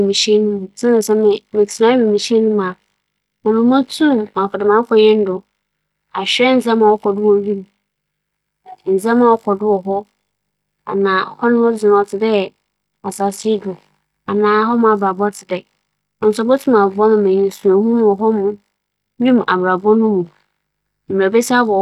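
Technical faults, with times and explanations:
No technical faults found in the speech recording.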